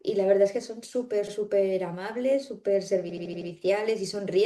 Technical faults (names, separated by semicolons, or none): repeated frames